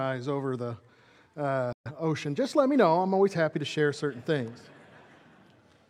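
A digital broadcast dropout runs from 1.73 to 1.91 s. The receiver stopped getting usable frames, either because the signal was lost or because frames failed their error check, so it muted its output rather than play corrupted data. The sound fades out in about 3 ms, almost a hard cut, and leaves a gap of silence. About 128 ms of programme is missing, which fits a few lost frames. The sound resumes further along, and that stretch of programme is gone.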